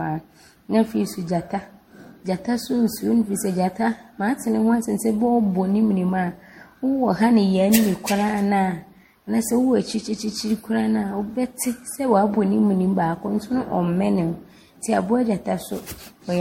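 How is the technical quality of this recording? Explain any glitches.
The speech shows generation loss that runs through the whole recording. It likely went through a lossy MP3 chain around seven times, decoded and encoded again at a rate that fits 64 kbit/s. Each new pass quantised the signal on a shifted frame grid, so noise and spectral gaps piled up instead of staying put. The result is swirly, hollow, smeared speech with blurred consonant attacks, and nothing at all above 16.6 kHz.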